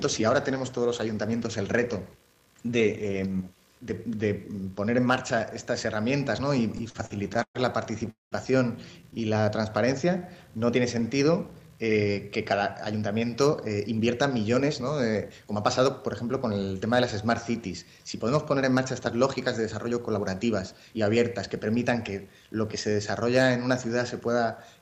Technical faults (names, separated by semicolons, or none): repeated stalls (stutter); call audio freeze; jitter buffer slow-down; jitter buffer speed-up